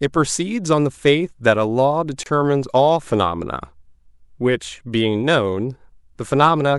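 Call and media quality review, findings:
Short hole in continuous speech at 2.23–2.26 s: 26 ms gap, smeared edges, speech picks up exactly where it stopped. Gap at a join of encoded pieces: separately encoded segments spliced untrimmed, leaving encoder start delay and last-frame padding.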